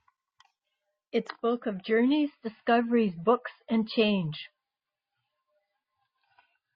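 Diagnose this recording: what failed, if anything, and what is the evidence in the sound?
The network stage let this one down: the adaptive stream switched to a lower bitrate. At 1.29 s the speech suddenly loses everything above 5.1 kHz and picks up a smeared edge, with no gap at the switch, and it stays that way to the end. The sound fits the player falling from a rendition around 128 kbit/s to one near 24 kbit/s MP3 when throughput dipped, so the encoder had to discard the treble to fit.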